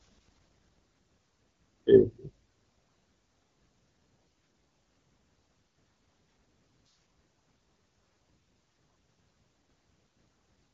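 Nothing goes wrong anywhere in this speech recording, which comes through the AMR wideband (HD Voice) codec at 12.65 kbit/s with just the light touch of coding you'd expect at that rate.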